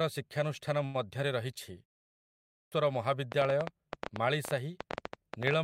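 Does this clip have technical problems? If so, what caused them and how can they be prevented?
Yes, there are three separate problems in this speech clip.

From 0.85 to 0.96 s there's a short stall from a late packet. A packet didn't show up on time, the jitter buffer ran dry, and the receiver held the last bit of sound for about 88 ms until the packet arrived. Nothing is actually lost, since playback picks up right where it left off, but that one sound drags on too long with a faint buzzy hold. The whole stream also ends up about 88 ms later than before. To prevent it, give the jitter buffer a bit more headroom or use adaptive buffering that grows when arrivals get uneven.

At 2.27 s, after a roughly half-second pause, you get a clipped start after a pause. The output device dozed off during the silence and took time to wake or relock, so about 450 ms of sound is swallowed until 2.72 s. 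Speech jumps in abruptly without its opening. That's a lot to lose, nearly half a second. To prevent it, disable power saving on the output device or keep a near-silent signal flowing so it never sleeps.

From 3.32 s to the end of the clip there's a train of clicks. The pops come at about 11 per second, unevenly spaced, and peak well above the speech, so they stand out clearly and tick right through the gaps too. They're all much the same shape, which most likely points to electrical interference from nearby gear or a faulty connection or power supply. To prevent it, move cables away from noisy equipment and check the connections and power supply.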